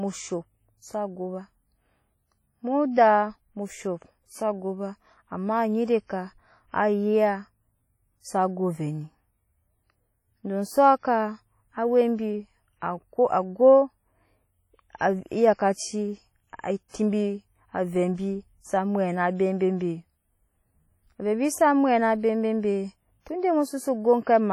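Right through the speech there's heavy transform-codec damage, most likely WMA compression at a low bitrate, around 32 kbps. Quantisation noise smears over long blocks, so the audio sounds ringing and washy, with a hiss that swells and fades with the signal.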